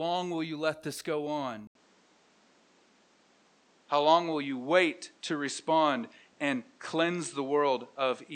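At 1.67 s, just after "you let this go", the sound cuts out for 80 ms. It stays dull to the end, with nothing above 8.8 kHz. Level shifts a few decibels, and faint new noise appears. Likely cause: input switched to a poorer device.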